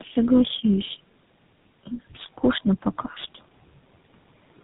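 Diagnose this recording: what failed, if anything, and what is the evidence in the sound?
Call processing is the first failed stage: noise suppressor artifacts run through the whole clip. The room noise, sitting about 19 dB below the speech, is pulled down by about 18 dB in the gaps between words and then swells back up under each phrase. The suppressor decides band by band and frame by frame what counts as steady noise.

The codec stage shows tandem speech coding, also present throughout. The band stops sharply at 3.8 kHz, and the speech is rough and muffled with a warbly texture that is heavier than one low-rate coder would leave. That pattern fits two speech codecs in a row, likely a G.729A link handing off through G.711 to GSM full rate. Each coder re-encodes the previous one's distortion, so the errors stack.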